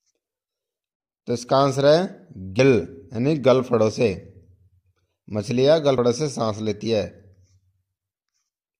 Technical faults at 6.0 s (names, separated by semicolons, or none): compressed frames skipped